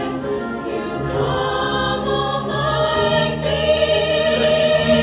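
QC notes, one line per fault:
Nothing to flag here; I listened all the way through and didn't hear a single problem worth noting.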